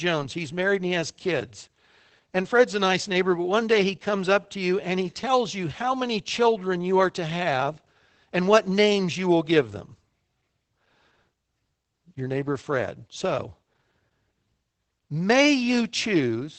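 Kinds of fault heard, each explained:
Opus voice compression: Across the whole speech clip, a linear-prediction voice coder has rebuilt the signal from a compact vocal-tract model and a coarsely quantised excitation, which leaves the voice muffled, slightly hoarse and faintly robotic. Nothing is heard above about 8 kHz, which points to wideband SILK operation. The plainly audible damage fits a bitrate near 12 kbps, with artefacts changing at a pace that suits 20 ms frames.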